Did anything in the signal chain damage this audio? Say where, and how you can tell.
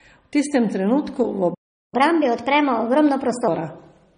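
Yes. At the codec stage, the audio was likely transcoded between lossy codecs: nothing remains above 9.7 kHz for the whole clip, and two kinds of coding artefact are stacked together. This fits an MP3 encode at a low bitrate that was then re-encoded to AAC-LC, with the second codec spending its bits on the first codec's damage.

At playback, a stall cuts the sound off mid-flow from 1.54 s to 1.94 s, a gap of about 0.38 s. The likely cause is the player running out of buffered data or having its thread blocked, so the output went silent until data arrived again.

Right after the stall, the player does a catch-up at higher speed from 1.94 s to 3.48 s. It resamples its backlog to play 1.25 times faster, so the sound is both quicker and roughly four semitones higher until the lost time is recovered and normal speed returns.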